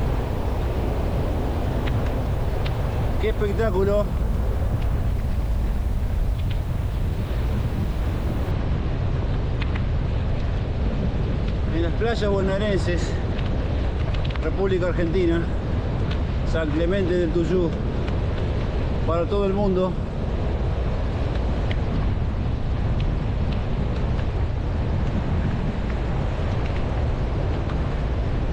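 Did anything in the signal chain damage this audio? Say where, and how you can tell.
Yes. Sample-format conversion likely reduced the word length with straight truncation and no dither, leaving low bit depth without dither from the start to 8.51 s. Only about 7 bits' worth of levels remain, so the rounding error tracks the waveform instead of forming a steady hiss. It sits roughly 30 dB below the signal, so quiet passages turn grainy, and the grit shifts as the sound changes.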